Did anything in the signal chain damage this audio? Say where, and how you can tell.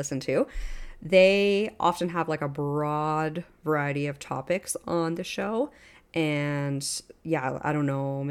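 No, nothing in this speech stood out on listening as damage from any stage of the signal chain.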